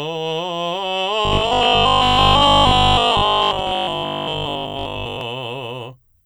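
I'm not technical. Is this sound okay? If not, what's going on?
No. From about 1.25 s to 5.21 s the music takes on robotic sound from repeated short buffers: a stiff, metallic buzz pitched at 50 Hz, which fits a 20 ms chunk being replayed. The likely cause is audio arriving too slowly, so the player keeps repeating the last fragment to fill gaps. For most of that stretch you hear repeats rather than new music, which flattens it into a buzz that only loosely follows the original.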